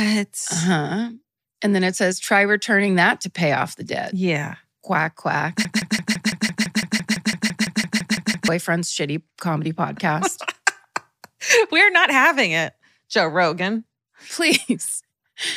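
A broken-record loop runs from 5.65 to 8.48 s in this speech clip: a 168 ms fragment repeats seventeen times back to back, likely from a stalled player or stream.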